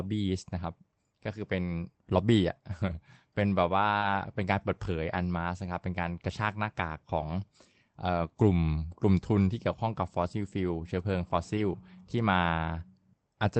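At 2.87 to 2.93 s, the speech turns briefly rough and noisy. This is a lost packet rebuilt from error correction. About 40 ms went missing, which fits two lost packets. The decoder played the low-bitrate copy carried in the next packet, so no gap opens.

From 3.97 to 4.03 s comes a short concealed packet loss. About 40 ms never arrived in time. The receiver stretched the preceding sound across the hole and then blended back, giving a quick smear or wobble. Its last 20 ms, from 4.01 s, is also rebuilt from error correction, so the tail sounds coarse.

At 7.21 to 7.31 s, a longer stretch of about 60 ms is rebuilt the same way, fitting three lost packets. It sounds grainier and noisier. At 11.57 to 11.59 s, a single rebuilt 20 ms frame gives only a brief rough patch. The band tops out near 8 kHz, as expected from the Opus call path, whose sound fits about 24 kbps.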